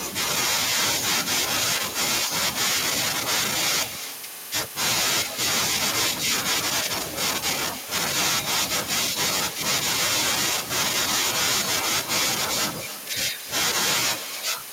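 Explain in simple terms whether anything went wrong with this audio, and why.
Something did go wrong: there's echo with no canceller running through the whole recording. Every bit of speech gets followed, about a third of a second later, by a quieter, thinner copy. What's happening is that the far end is playing the call out loud, their microphone catches it, and nothing strips it out, so the talker's own voice comes straight back after the trip across the network.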